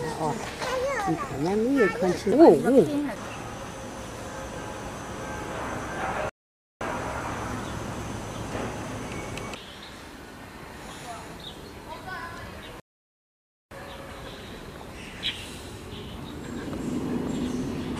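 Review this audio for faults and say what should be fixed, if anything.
The sound drops into silence at 6.30 s for about 0.51 s and again at 12.80 s for about 0.91 s, then picks up exactly where it stopped. These are rebuffering stalls: playback ran out of downloaded audio and paused until more arrived, adding time without losing any. To prevent them, buffer more audio ahead of playback or lower the streaming bitrate so delivery keeps pace.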